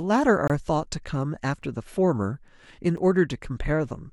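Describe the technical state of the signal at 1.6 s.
A block of digital silence at 1.62 s cuts the speech out for about 5.8 ms, a length that fits a 256-sample buffer left unfilled. The samples in that stretch were replaced by zeros, most likely because the program did not deliver the output buffer in time. The signal drops straight to zero and returns with no fade, so the two abrupt edges merge into a single tick or dip rather than an audible hole.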